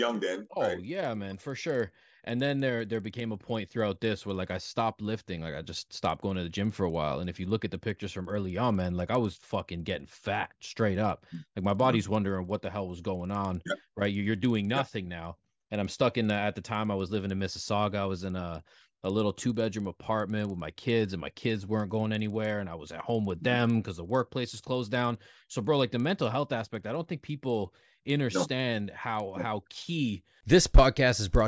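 A speech clip with a steady 20 Hz tick-buzz running underneath it the whole way through, present only when there's signal. That's a resampler restarted on every block: the 48 kHz to 16 kHz conversion gets redone fresh every 50 ms, so each block edge picks up a small error.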